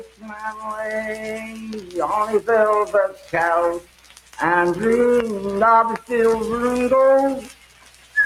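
Running under the whole thing there's Wi-Fi interference: a steady tick roughly ten times a second, matching a 102.4 ms beacon period, sitting somewhere around 30 dB below the signal. That's a nearby Wi-Fi radio whose bursts are being picked up and rectified by the audio circuit, so the beacon comes through as a regular click pattern.

Also present all the way through is a noise suppressor applied to music or sounds, a speech-tuned suppressor that was left on. It treats sustained and ambient parts of the sound as noise and pulls them down, with the gain swinging by something like 15 dB. Onsets mostly get through, but anything held sinks behind them, so the level pumps and the sound thins out instead of sitting steady.

The worst spots are where that sound gets cut by the noise suppressor outright. From 0.0 to 0.66 s it dips by about 16 dB. Between 1.16 and 1.95 s the drop is milder, about 7 dB. 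At 2.86 to 3.34 s it's about 11 dB, then about 16 dB again from 3.8 to 4.39 s and from 7.41 to 8.16 s. In each stretch the steady or decaying parts collapse or get their tails chopped while sharper hits survive, which leaves holes lasting a few hundred milliseconds each.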